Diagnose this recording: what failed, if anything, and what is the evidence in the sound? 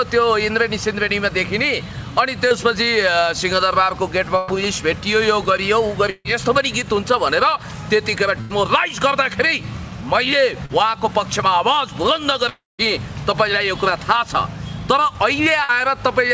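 Short concealed packet loss at 2.48–2.54 s and 10.66–10.72 s, at the network stage. Each leaves a brief smear where about 30 ms never arrived. The receiver extended the preceding sound for roughly 26 and 35 ms, then blended back into real audio.

Burst of packet loss at 4.37–4.51, 6.10–6.28, 8.41–8.53 and 15.64–15.74 s. Runs of about 60 to 150 ms were lost in transit. Concealment held and faded the last sound before resuming further on. At 6.10 s it decays into about 30 ms of silence.

Long network dropout at 12.49–12.82 s. The sound continues as a fading buzz or hiss for about 0.1 s and then goes to roughly 0.19 s of silence. About 0.3 s of audio is gone, likely because packets stopped arriving for that stretch. Across the G.722 call path, nothing is heard above 8 kHz.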